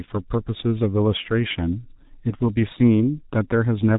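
From start to finish the speech carries heavy G.723.1 codec damage: a muffled, hoarse sound with smeared consonants, consistent with a coder near 6 kbit/s. Unlike simple low-pass filtering, the roughness and blurring come from a coarse voice model updated only every 30 ms, not just lost treble.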